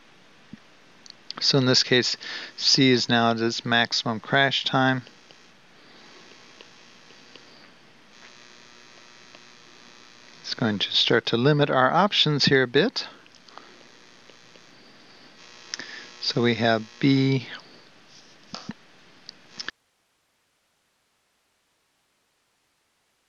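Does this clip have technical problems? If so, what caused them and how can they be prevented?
Yes. At 19.7 s the sound cuts out abruptly and never returns, leaving an audio dropout to a faint residue that runs to the end. The gap holds only hiss, roughly 50 dB below the signal. The likely cause is a lost connection or failed source while the path after the break stayed live. On a waveform the envelope collapses to a thin flat band; a spectrogram shows energy vanishing at once, leaving uniform broadband noise. Secure cabling and monitor the input during capture.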